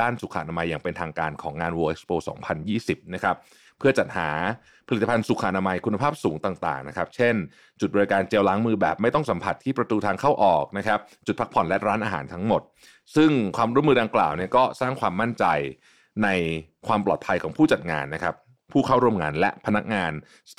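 No technical faults can be heard in this speech recording.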